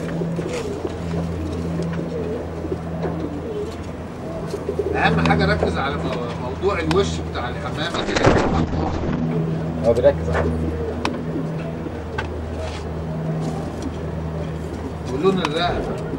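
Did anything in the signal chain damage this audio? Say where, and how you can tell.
Yes, a call bitrate drop at the codec stage from 7.97 to 9.32 s. The audio turns coarse and muffled, with content above 8 kHz gone for about 1.24 s. That fits the encoder being pushed from about 128 kbps to roughly 7 kbps.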